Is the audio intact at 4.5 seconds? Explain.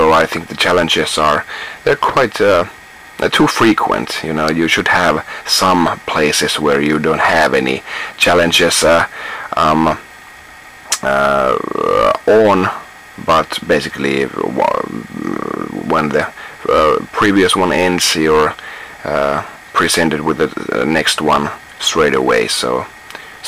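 No. At 4.5 seconds, as everywhere else in the clip, there is hard clipping: the signal is driven about 13 dB beyond what the stage can pass, so its peaks are sliced flat, affecting a few percent of samples. It is heard as crackle on the peaks, or as a harsh fuzz on loud sounds. On a waveform the peaks sit as flat plateaus, and a spectrogram shows a haze of harmonics spreading high up the spectrum.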